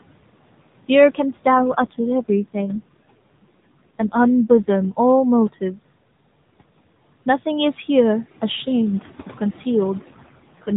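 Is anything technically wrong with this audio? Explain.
Yes, there are two faults in this speech clip.

Noise suppressor artifacts run throughout. A suppressor estimates the steady background and cuts it, frame by frame, by about 18 dB, so the faint room noise drops away between phrases and returns under the speech. Unlike a plain gate, which simply shuts and opens, it changes the tone of what it lets through.

AMR rate drops occur from 1.54 to 4.90 s and from 9.98 to 10.75 s. The voice turns buzzy and synthetic, which fits the codec stepping down from 12.2 to 5.9 kbps to give more bits to error protection. The audio band stays the same width and nothing cuts out, which is what separates this from a dropout or a bandwidth switch.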